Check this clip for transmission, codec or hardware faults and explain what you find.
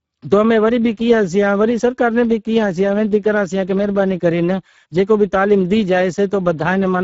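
One fault runs through the whole clip: Speex codec damage. It lasts from start to finish. Speex is a CELP coder. It models speech with a predictor and spends a small bit budget on the excitation signal. Here that budget is tight, which fits a bitrate near 10 kbps. The damage is plainly audible. Speech sounds noisy and hoarse. Nothing remains above 7.7 kHz, and the top band sounds like shaped noise, not real detail.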